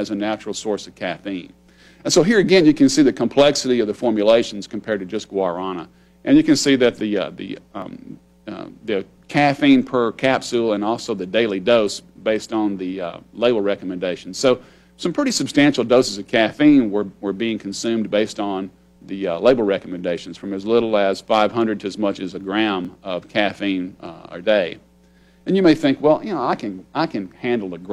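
At 7.82 s and 22.85 s there is a small jump ahead in the sound. Each is likely a dropped buffer (overrun), losing roughly 3 ms.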